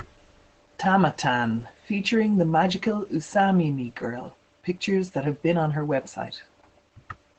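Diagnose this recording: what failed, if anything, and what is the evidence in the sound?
Codec stage: Opus voice compression throughout the speech. Nothing sounds above about 8.9 kHz, and the hoarse, slightly robotic tone fits a low SILK bitrate.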